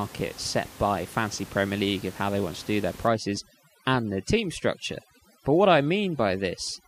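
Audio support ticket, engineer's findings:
Overdone noise removal from 3.07 s to end, right after "want to do their". Denoiser set too hard: bands near its noise estimate get gated out, so background goes near-silent with twinkly specks, and quieter voice detail drops. Room noise sits about 20 dB under speech, which is what the denoiser's chewing on.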